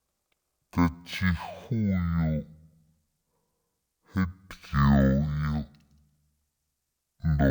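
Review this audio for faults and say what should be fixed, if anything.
The whole thing's a stereo-read-as-mono fault: interleaved left and right samples get played back as one channel, so the speech runs at half speed, a full octave low. Fix it by reading the file's channel count from its header and de-interleaving before playback.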